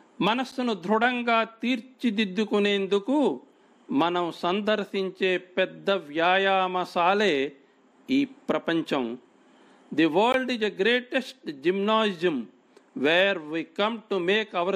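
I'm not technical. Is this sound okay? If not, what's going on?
No, there are two tiny dropouts, each a block of digital silence: at 0.51 s for about 10 ms and at 10.32 s for about 17 ms. The sound suddenly cuts to nothing and jumps back; the first one is so short it comes across as a quick tick.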